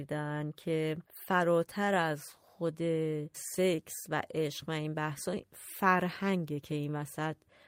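Speech, with clock drift between sender and receiver running through the whole clip: the sender's clock is about 2% slow, so the receiver's buffer keeps draining. Unlike random network jitter, which pushes timing both ways, this drift pulls steadily in one direction. Repeated timing corrections follow from 0.32 s to 7.20 s. Short pieces are repeated at uneven intervals, adding something like 150 ms and leaving the pace near 98%. These are slight hiccups rather than the clicks or gaps of packet loss, and every one stretches the sound.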